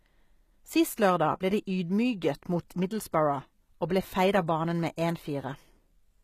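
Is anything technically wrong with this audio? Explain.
Yes, there is one fault. Throughout the speech, the damage is plainly audible, likely from HE-AAC compression, which fits a bitrate near 20 kbps. Only the lower spectrum is truly coded. The treble is rebuilt by copying lower bands upward under a coarse envelope, so harmonics misalign above the crossover and s sounds turn gritty, metallic or lispy. A spectrogram would show nothing above 14.9 kHz, with the upper band looking like a pasted, blocky copy of the lower one.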